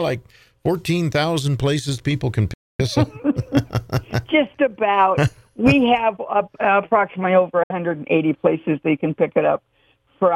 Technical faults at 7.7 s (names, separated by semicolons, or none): Bluetooth dropout